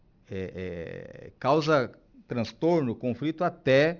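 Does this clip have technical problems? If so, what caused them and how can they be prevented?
Yes. Aliasing runs throughout this speech. Downsampling from 48 kHz to 12 kHz without a low-pass filter folded energy above 6 kHz back down, making sibilants gritty. Filter below 6 kHz before resampling.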